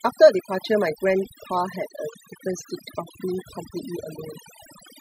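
Overdone noise removal runs through the whole speech clip. The noise reduction was set too strong. It shut off frequency bands sitting near its noise estimate, taking quiet parts of the voice too. Pauses drop to near silence with twinkling specks.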